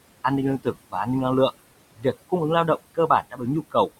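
Noise suppressor artifacts run through the whole clip. The room noise, sitting about 15 dB below the speech, is pulled down by about 20 dB in gaps and lets back up under the speech. On a spectrogram the floor looks patchy and speckled, pumping with the speech.

Speech cut by the noise suppressor appears from 1.96 to 2.31 s, where the suppressor mistakes low-level speech for noise and drops it by about 20 dB across roughly a tenth of a second. It sounds swallowed. The waveform envelope shows a sudden notch, and the spectrogram shows missing energy.

The same speech cut by the noise suppressor returns from 2.95 to 3.42 s, this time with a deepest drop of about 19 dB spread over roughly a fifth of a second. Soft sounds fade abruptly, and on a spectrogram the quieter speech energy is blanked into the suppressed floor.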